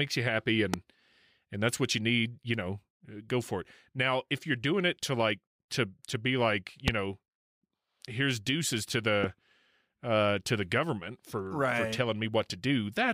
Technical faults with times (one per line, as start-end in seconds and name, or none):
0.74-0.76 loud pop
6.88-6.90 loud pop
9.24-9.26 loud pop